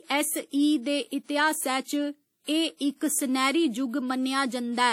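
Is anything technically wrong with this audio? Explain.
Yes. The whole speech clip has plainly audible codec damage, likely WMA compression: ringing and washy, with hiss that breathes along with the speech. Long transform blocks smear quantisation noise and drop weak detail. Nothing survives above 16.2 kHz, which fits a bitrate around 48 kbps.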